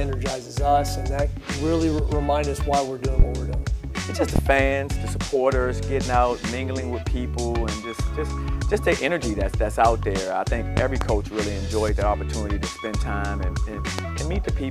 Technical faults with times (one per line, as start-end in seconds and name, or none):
3.19-3.23 loud pop
4.36-4.40 loud pop
10.77-11.05 loud pop
13.99-14.02 loud pop